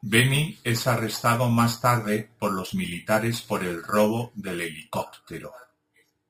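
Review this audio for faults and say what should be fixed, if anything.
Imaging from sample-and-hold upsampling runs through the whole clip. Each sample was repeated without a smoothing filter, which fits speech raised from 12 kHz to 48 kHz. Mirrored copies appear, the lowest between 6 and 12 kHz at about 16 dB below the speech, heard as a metallic fizz that tracks the voice and moves against its pitch. To prevent it, upsample with a proper interpolating low-pass filter that removes everything above the original 6 kHz band instead of holding samples.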